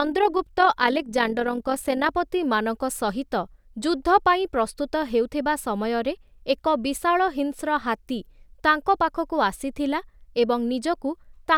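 Speech, with overlap-add ripple from 0 to 2.16 s: a fast, rough tremolo of about 6 dB at around 40 Hz. The flutter is steady and tied to the frame rate, which sets it apart from amplitude-modulation interference or jittery dropouts. Windowed frames were rejoined with an overlap that doesn't sum to constant gain.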